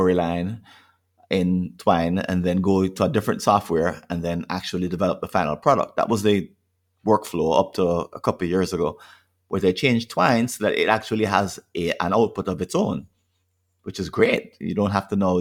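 Speech recording; no audible technical faults anywhere.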